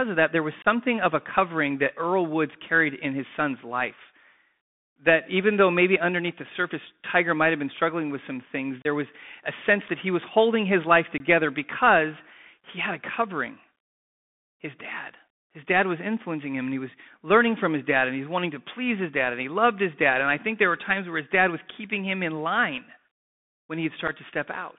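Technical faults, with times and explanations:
Throughout: Bluetooth CVSD headset codec. The speech sits in a narrow line band, from about 150 Hz to 3.6 kHz, with nothing above. The sound fits a 64 kbps CVSD link. Each sample is only one bit saying up or down, and the step size adapts. So loud, bright sounds outrun the step and distort. S sounds turn scratchy. A grainy hiss lies under everything. The damage is plainly audible.
0.62–0.67 s, 8.82–8.87 s, 11.18–11.20 s, 24.08–24.10 s: unconcealed Bluetooth headset packet loss. The first hole falls after "of that there was", before "of a covering that". The second falls after "struggling with some things", before "was a sense that". The third falls after "was holding his life", before "because he had a". The last comes near the end. The gaps last 22.5 ms, 30 ms, 22.5 ms and 7.5 ms. Short voice packets were lost, one to four at a time, and nothing filled them in. 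The sound drops out abruptly, with hard edges.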